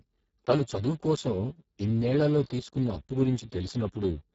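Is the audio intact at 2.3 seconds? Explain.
No. At 2.3 seconds the speech carries Speex codec damage, which runs through the whole clip. With so few bits for the excitation, the speech sounds hoarse and noisy, which fits a bitrate near 6 kbps. Above 4 kHz there is only a noise-like fill, and nothing above 7.6 kHz.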